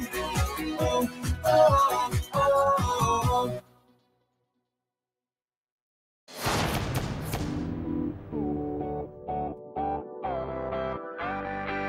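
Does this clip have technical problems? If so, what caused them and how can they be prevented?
Yes. A noise suppressor meant for speech was left on across the whole clip, treating steady tones and decaying tails as noise, so level swings by roughly 15 dB. Unlike compressor pumping, sudden attacks pass intact while held sound sinks. Bypass suppression for non-speech material.

Sound cut by the noise suppressor is clearest at 0.0–1.5 s (drop of about 16 dB), 1.88–2.41 s (about 19 dB) and 2.77–4.25 s (about 21 dB), where sustained sound fades and tails shorten, unlike a dropout's abrupt silence. Disable or lighten suppression upstream.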